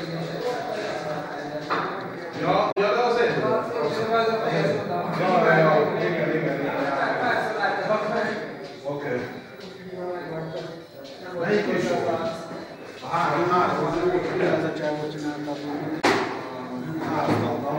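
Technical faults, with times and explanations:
2.71 to 2.78 s and 16.00 to 16.05 s, damaged data in a compressed stream: two brief bursts, about 70 ms and 44 ms long, where corrupted bytes in the encoded stream make the decoder misread frames, lose sync and hunt for the next valid frame header. A simple dropout would give silence, and a click would be a single sharp edge.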